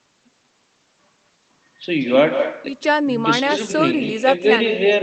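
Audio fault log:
Throughout: echo with no canceller. The far end's loudspeaker feeds its microphone unchecked, so each phrase returns roughly 150 ms later at about 7 dB down. A waveform shows a smaller trailing twin after every burst, and a spectrogram shows weaker shifted copies of each syllable.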